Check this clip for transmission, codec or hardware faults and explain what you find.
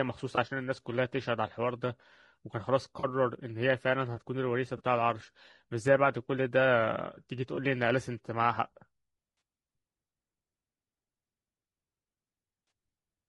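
Two faults are audible in this speech: a steady codec coarseness and six brief dropouts that have been patched over.

Throughout, the speech sounds rough and grainy. Noise sits between the harmonics, and the top band sounds thin and synthetic. The likely cause is low-delay AAC compression, as in AAC-ELD. Its short frames resolve pitch poorly, and the damage fits a bitrate near 32 kbps.

AAC frame loss with concealment occurs at 0.35, 2.99, 4.77, 7.55, 9.37 and 12.67 s. Each gap lasts 20 or 40 ms, which fits one or two lost frames. The decoder rebuilt them from the previous spectrum. Each gap is heard as a short smeared, noisy patch.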